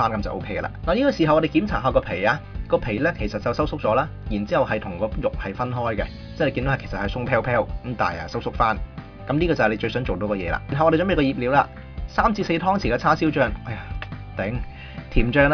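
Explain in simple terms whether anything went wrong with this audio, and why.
Nothing went wrong here.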